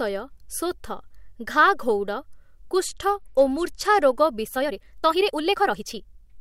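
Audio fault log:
2.88–4.13 s Bluetooth SBC bit pool drop: the treble dulls and a gritty grain rises, which fits the encoder cutting its bit pool from 31 to 14 (about 99 kbps). On a spectrogram the upper bands go empty or patchy, with noise speckling the rest.
4.53–6.41 s time-stretched section: the pace abruptly jumps to about 1.59 times faster while pitch holds, sounding rushed, likely from software dropping short pieces to shorten the audio. The waveform shows tighter syllable spacing and small splice jumps. Spectrogram harmonics stay level.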